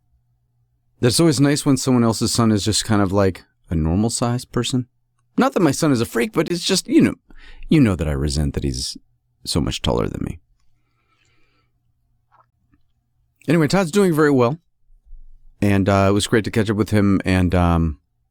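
At 0.47 s, 6.48 to 6.50 s (between "is a freak but" and "it's just you know") and 12.50 to 12.53 s, the speech drops into short hard-edged silences, a gap between stream segments every 6 s. The timestamps leave a small hole, about 6 to 23 ms, filled with silence, and nothing is lost.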